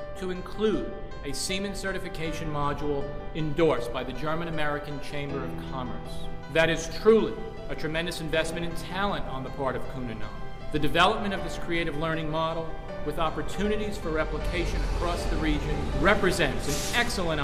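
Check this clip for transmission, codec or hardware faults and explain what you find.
Nothing stands out here; I listened through and didn't hear anything that points to a problem in the transmission chain or the playback hardware.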